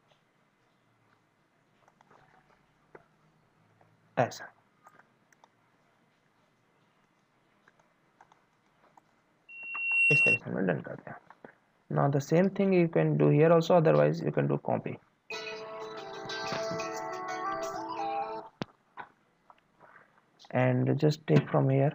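At 9.49 s a loudspeaker feedback squeal starts. A 2.7 kHz tone swells within about half a second, peaking about 5 dB above the sound, then stops at 10.41 s.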